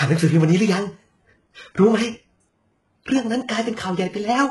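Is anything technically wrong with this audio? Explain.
Yes. All the way through this speech clip the top end sounds synthetic: the highs are grainy, s sounds come out gritty and lispy, and nothing at all sits above 11.5 kHz. That's likely HE-AAC compression, heavily squeezed at a rate that fits something very low, around 12 kbps. The codec keeps only the lower spectrum properly and fakes the treble by copying lower bands upward under a rough envelope, so those rebuilt harmonics don't line up with the real ones.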